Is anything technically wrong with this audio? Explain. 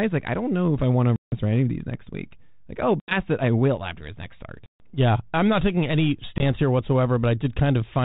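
Yes. The speech has four packet loss dropouts on an ADPCM call. They fall at 1.16 to 1.35 s (between "if I want to" and "any of these next", about 160 ms lost), 3.0 to 3.14 s (80 ms), 4.66 to 4.88 s (after "after his next start", 140 ms) and 6.38 to 6.43 s (after "I'm not taking any", 20 ms, roughly one packet). Each gap is hard-edged silence. Because the receiving decoder's predictor and step size drift from the sender's, speech resumes slightly distorted before settling. The light band-limited G.726 colouring fits 32 kbit/s.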